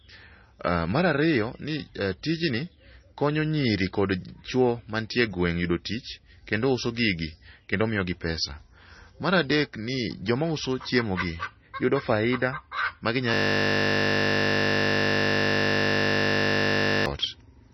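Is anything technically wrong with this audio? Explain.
Yes, there are two faults. Throughout the speech, the sound is watery and swirly, with smeared consonants and nothing above 5.9 kHz. This is likely heavy MP3 compression at a low bitrate, around 24 kbps. A spectrogram shows a hard ceiling at 5.9 kHz and flickering, patchy upper bands.

From 13.34 s to 17.06 s, a system hang loop takes over. The hardware keeps replaying one 20 ms stretch of audio 186 times, which produces a steady 50 Hz buzz. The waveform shows identical repeating cycles, and the spectrogram shows evenly spaced horizontal lines at multiples of 50 Hz.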